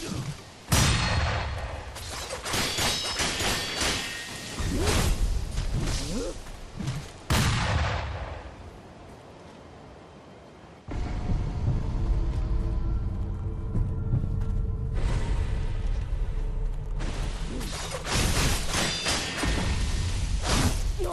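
No technical faults can be heard anywhere in the audio; the signal stays continuous and steady throughout.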